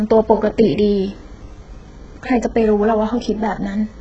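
A very low-bitrate codec, likely HE-AAC compression, runs throughout the speech: the treble is rebuilt by copying lower bands upward rather than coded, so s sounds turn gritty and lispy, damage is heavy, which fits roughly 8 kbps, and nothing reaches above 8 kHz.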